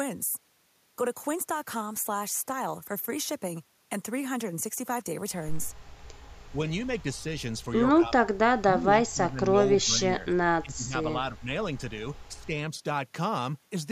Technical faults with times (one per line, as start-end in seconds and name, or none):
6.52-6.59 speech suppressed in double talk
7.98-9.57 speech suppressed in double talk
9.83-11.49 speech suppressed in double talk
12.35-12.51 speech suppressed in double talk